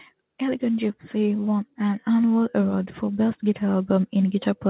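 Nothing stood out on listening to this speech, which comes through the call path with its expected narrow band, with nothing heard above about 4 kHz.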